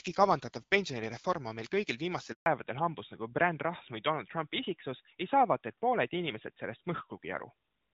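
At 2.32 s the speech cuts out abruptly and stays silent until 2.46 s, a dropout of 140 ms. This is a handover gap: the call was passed between networks and no speech frames arrived while the link changed, so whatever was said in that moment is gone. From 2.46 s to the end, everything above 4 kHz is missing, and the voice sounds duller and rougher than the clear, light-artefact HD Voice before the break. That is a fallback to narrowband, consistent with a drop from AMR-WB at around 12.65 kbit/s to AMR-NB at around 12.2 kbit/s.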